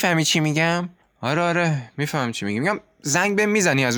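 No technical faults are audible anywhere in this recording.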